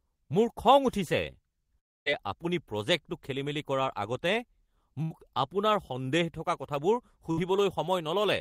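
From 1.79 to 2.21 s the speech breaks off for about 0.42 s. The last sound is stretched into a fading buzz or hiss that gives way to silence before speech resumes further on. This is likely a long network dropout, with about 260 ms of audio never arriving.

At 5.03 to 5.12 s and again at 7.31 to 7.39 s there are two much shorter gaps, a burst of packet loss each time. About 80 ms and then 60 ms of speech went missing. The receiver held and faded the preceding sound across the hole, so each gap is a brief smeared buzz or hiss rather than a drop into silence, and speech jumps ahead afterwards.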